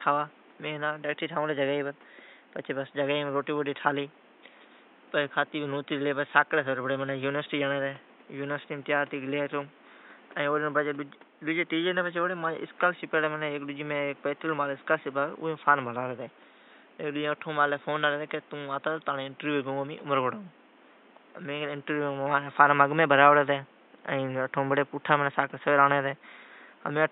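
No technical faults can be heard in this speech recording. A steady room noise sits in the background, about 29 dB below the speech, and belongs to the space where the microphone was rather than to the system.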